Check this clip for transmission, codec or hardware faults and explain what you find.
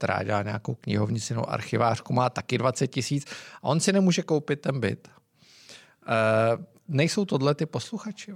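No faults can be heard anywhere in this speech.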